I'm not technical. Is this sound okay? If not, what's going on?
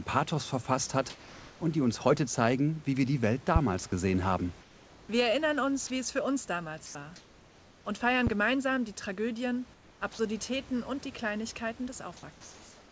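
No. Three kinds of fault can be heard.

Comfort noise in place of the background: during pauses, the calling system likely stopped sending the real room sound and the receiving end filled the gap with made-up hiss. The background turns flat and featureless, usually a little quieter, at 4.61–5.09 s, 6.86–6.95 s (just after "wie es für uns"), 7.16–7.85 s (just before "und feiern"), 9.74–10.01 s and 12.32–12.92 s.

Sound dropped by the voice detector: the part of the system that decides when someone is talking likely mistook brief bits of sound for background and cut them. Brief scraps of sound vanish into that steady hiss at 5.87–5.90 s and 10.13–10.19 s.

Loud pop: a sudden electrical jolt, likely from a plug, switch, static or driver glitch, got into the signal. It makes two sharp pops in quick succession at 8.27–8.35 s, just after "und feiern", loud above the speech, which continues underneath.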